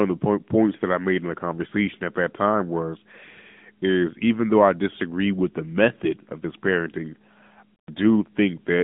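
Speech squeezed through the AMR narrowband mobile codec the whole way, so nothing gets past about 3.7 kHz and the line band sits at 150 Hz to 3.6 kHz. The plainly audible codec damage fits a mid-rate mode of around 10 kbps.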